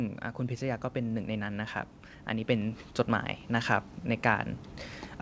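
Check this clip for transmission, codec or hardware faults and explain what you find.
One fault is audible: a gradual level increase. From 2.27 to 4.54 s there is automatic gain rising. The gain control treats the input as too quiet and lifts it by about 5 dB, so voice and background noise swell together. The call path's band stops at 8 kHz, which fits a wideband codec such as G.722.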